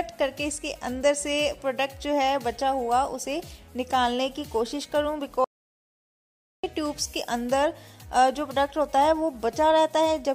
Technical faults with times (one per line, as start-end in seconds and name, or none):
5.44-6.63 audio dropout to silence
9.52 lost LE Audio frames